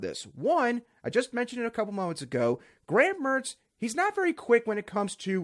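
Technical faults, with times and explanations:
Nothing here needs flagging: the recording runs along without a single technical hiccup worth a timestamp.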